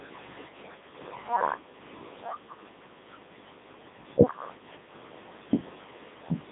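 Speech that sounds robotic and buzzy from start to finish, with a synthetic quality and nothing above about 3.8 kHz, leaving a narrow radio-style band of roughly 150 Hz to 3.7 kHz. This is heavy Codec 2 vocoder damage, consistent with its top 3.2 kbit/s mode. Only pitch, voicing, energy and a coarse spectral envelope survive, and the decoder rebuilds the speech from sine waves, so the original waveform and its natural texture are gone.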